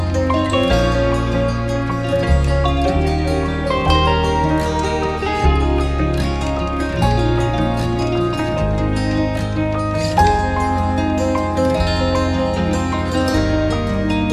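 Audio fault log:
No technical faults can be heard in the audio.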